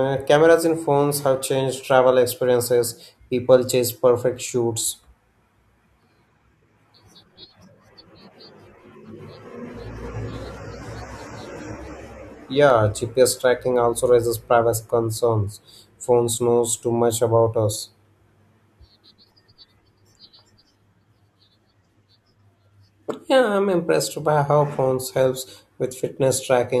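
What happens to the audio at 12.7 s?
At 12.70 s a single sharp click cuts through the speech, the mark of dropped samples: the waveform jumps straight from one value to a later one, likely because a handful of samples, a fraction of a millisecond, went missing. Unlike a dropout, no sound is audibly removed.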